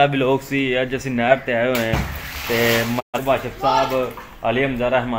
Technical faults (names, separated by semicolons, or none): digital broadcast dropout